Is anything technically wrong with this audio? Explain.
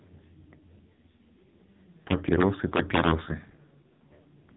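Yes. The whole clip has the AMR narrowband mobile codec: nothing above 3.8 kHz, and the pulse-driven vocal-tract model makes speech buzzy and synthetic, which fits a very low 5.15 kbps mode.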